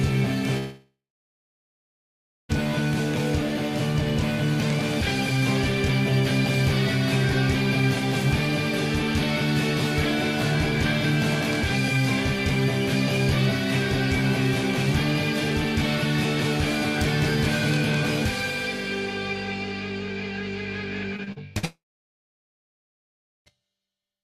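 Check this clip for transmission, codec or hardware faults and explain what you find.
There are two transmission faults here, both from a network link losing audio, and they cluster near the end with one more right at the start.

From 0.57 to 2.51 s and again from 21.65 to 23.48 s you get a long network dropout. The likely cause is the stream simply stopping arriving for around 1.9 s and 1.8 s. The receiver smears the last sound into a fading buzz, then it's near-silence for about 1.5 s and 1.7 s before audio resumes with that stretch gone.

Just before the second dropout, from 21.16 to 21.65 s, there's repeated packet loss with a robotic sound. Four short holes, the longest 47 ms, each get patched by extending the previous sound, so about a quarter of that half-second is filler. It comes across choppy, leading straight into the dropout.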